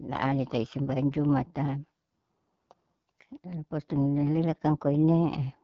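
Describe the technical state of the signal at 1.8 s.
AMR wideband (HD Voice) codec damage is present at 1.8 s, as it is across the whole clip. The speech is modelled up to 6.4 kHz, with synthetic noise above that and nothing beyond 7.5 kHz. The clearly rough, raspy texture points to one of its lowest rates, around 8.85 kbit/s.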